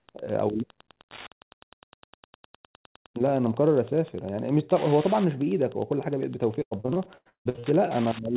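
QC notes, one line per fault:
throughout: Wi-Fi interference. A steady tick repeats every 102.4 ms, about ten times a second, sitting about 20 dB below the speech. A nearby Wi-Fi radio's beacon bursts are being rectified by the audio circuitry and turned into audible clicks.
6.62 to 7.65 s: repeated packet loss (robotic sound). Around a dozen dropouts hit this stretch. The longest runs 159 ms, and about half the span is concealed by stretching the last sound over each hole, giving choppy speech within the 4 kHz telephone bandwidth.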